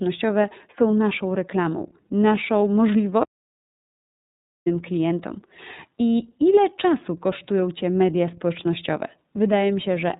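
From the start, the speech carries iLBC codec damage, plainly audible. Nothing above 4 kHz survives, and the rough, synthetic texture fits the 13.33 kbps mode with 30 ms frames.

From 3.23 to 4.67 s, an audio dropout to silence removes about 1.43 s. The speech cuts off into total silence, likely from lost input.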